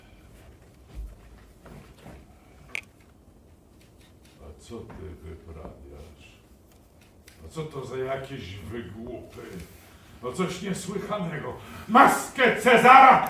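Nothing is technically wrong with this clip.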